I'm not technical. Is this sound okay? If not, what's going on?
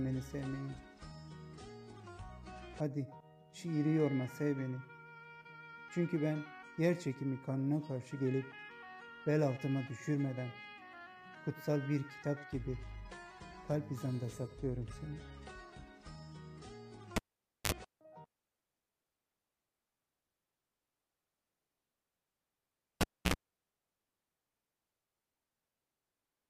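No. At 17.16 s and again at 23.01 s there's a pop, the sound drops out, a short low hum breaks through, and a second pop brings it back. This is a cable pulled and plugged in while live. The first gap lasts about half a second, the second about 0.28 s. The hum, roughly 50 to 60 milliseconds each time, is mains power leaking in while only the plug's tip touches, at 50 Hz the first time and 60 Hz the second.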